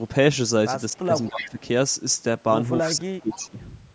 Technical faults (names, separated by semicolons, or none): speech suppressed in double talk; echo leak